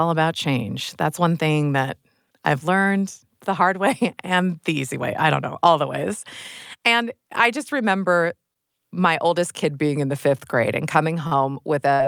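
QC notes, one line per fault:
8.53–8.59 s and 11.27–11.46 s, short stall from a late packet: a sound briefly hangs for 23 ms and 42 ms while the empty jitter buffer waits; the second stall then skips 37 ms to catch up.
11.94–12.02 s, burst of packet loss: the last sound is held and fades, then jumps ahead. Lost packets left 60 ms missing, and the receiver covered 57 ms by extending the last sound.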